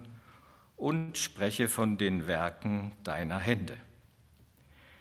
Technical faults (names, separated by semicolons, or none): call audio freeze